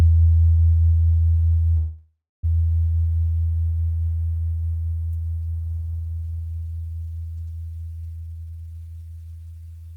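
At 1.77 s the sound stops moving forward and turns into a smeared continuation of its last moment, a buzz or hiss that fades, then about 260 ms of silence before it resumes at 2.45 s. This is a call audio freeze, likely caused by packets stalling in transit so the jitter buffer ran dry. Nothing is lost: roughly 0.66 s of filler is inserted and everything after shifts later. A spectrogram shows horizontal streaks decaying into a blank band, and the waveform shows a tapering envelope and then a flat line.

From 8.16 s to 9.62 s a jitter buffer speed-up plays the sound at about 145% speed without raising its pitch. It sounds hurried and compressed. After a backlog built up, the receiver repeatedly trimmed short pitch-period-sized slices to bring the delay back down, removing around 0.7 s in total. On a spectrogram the events crowd closer together while their frequency bands stay put. The waveform shows tightened spacing.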